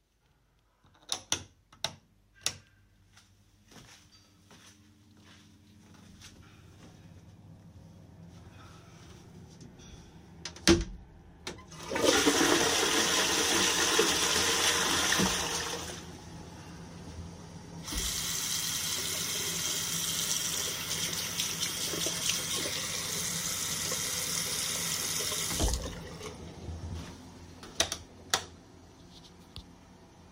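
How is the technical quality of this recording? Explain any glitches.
Listening through these everyday sounds, nothing stood out as a technical problem.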